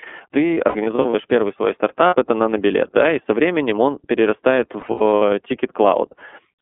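iLBC codec throughout: the speech is confined to a narrow telephone band, roughly 250 Hz to 3.4 kHz, and sounds rough and synthetic, consistent with iLBC's 30 ms, 13.33 kbps mode. Lost iLBC frames follow, at 0.54 to 1.14 s, 2.07 to 2.15 s and 4.8 to 5.22 s. Each time, the decoder fills the missing frames by repeating the last pitch cycle blended with noise, giving brief buzzy, held vowel sounds. The first and last spans are scattered dropouts, the longest around a tenth of a second, and each recovers almost immediately.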